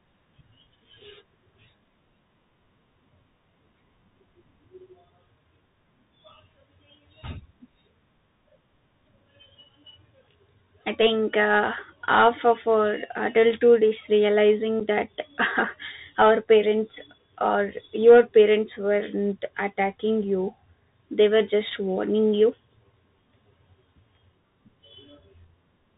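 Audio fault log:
Throughout: Bluetooth CVSD headset codec. The speech is band-limited, with nothing above 4 kHz, and a granular hiss sits under it. Sibilants turn scratchy where loud highs outrun the adaptive step. This fits a 64 kbps CVSD link. A spectrogram shows a hard ceiling at 4 kHz over a grainy noise floor.
14.80 s: unconcealed Bluetooth headset packet loss. About 7.5 ms of speech drops out, which fits a couple of lost packets replaced by silence or an idle pattern. The edges are abrupt, and the level returns quieter for a moment. The waveform shows a short flat gap with sharp edges.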